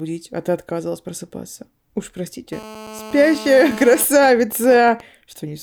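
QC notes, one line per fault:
2.53–4.03 s, GSM phone buzz: a 2G handset close to the recording chain was in an active call, transmitting its radio bursts about 217 times a second, and the audio circuitry rectified those pulses into the signal path. The result is a hard, raspy buzz at 217 Hz carrying a dense stack of harmonics, sitting about 16 dB below the speech and holding steady for the full stretch, with no relation to what is being said.
4.04–5.01 s, GSM signalling bursts: the same phone, still in the call but with its user silent, cut back to sending only short groups of bursts instead of a continuous train, and the circuitry again demodulated them. Rather than a steady drone, this comes through as even ticks with a longer 217 Hz buzz twice a second, at roughly the same loudness as the continuous buzz before it, stuttering until it stops just after 5 s.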